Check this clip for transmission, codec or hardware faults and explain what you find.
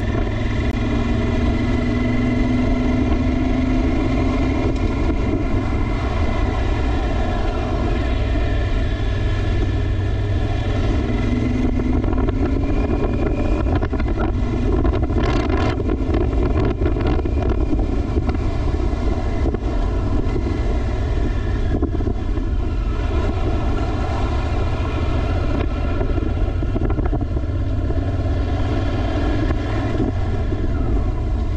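There's one fault, running the whole way through: channel delay (comb filtering). One channel lags by around 3 ms, so the mono sum cancels at evenly spaced notches starting near 150 Hz, sounding hollow and phasey.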